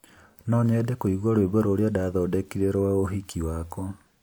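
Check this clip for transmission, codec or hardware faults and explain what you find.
Nothing to flag here, as the speech runs along without a single fault turning up anywhere in it.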